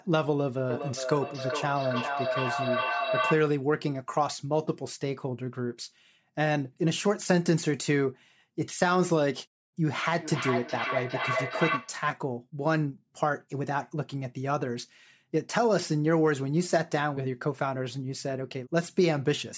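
Feedback echo between two devices runs from 0.7 to 3.6 s and again from 10.2 to 12.1 s: speech loops through a second device's loudspeaker into the microphone, returning roughly every 0.4 s, peaking about 3 dB and then about 4 dB below the speech.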